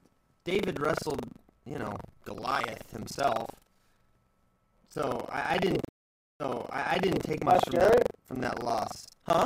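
From the start, buffer tearing adds a steady 23.4 Hz robotic rattle, consistent with a 2048-sample buffer. About a fifth of each buffer replays audio roughly a tenth of a second old, showing as evenly spaced vertical seams on a spectrogram.

At 5.82 s, after "I I didn't", a stream reconnect leaves a flat 575 ms gap in the waveform. Playback then resumes 830 ms earlier, repeating material before reaching "take much" around 7.23 s.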